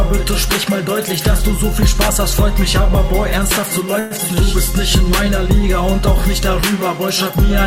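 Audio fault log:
3.99–4.13 s, call audio freeze: the last sound is held as a fading buzz for about 0.11 s, then the audio resumes exactly where it stopped, likely because delayed packets emptied the jitter buffer. Unlike a dropout, nothing is lost; everything after arrives 0.11 s later.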